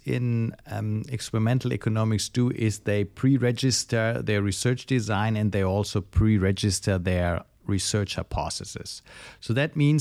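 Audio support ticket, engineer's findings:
No audible faults in the speech recording. Nothing found that needs action.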